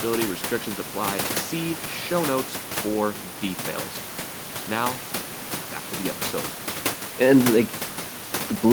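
No technical faults can be heard anywhere in the recording. The only thing beneath the speech is the room's own background noise, sitting about 11 dB below it, which belongs to the recording space rather than to any fault in the system.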